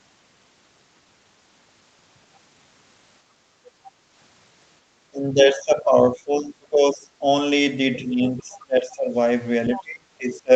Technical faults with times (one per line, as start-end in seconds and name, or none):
3.46-3.65 background gated by the echo canceller
5.07-7.23 speech suppressed in double talk
8.01-9.16 speech suppressed in double talk
8.40-8.61 other side's voice leaking through
9.72-9.83 other side's voice leaking through
9.76-10.51 speech suppressed in double talk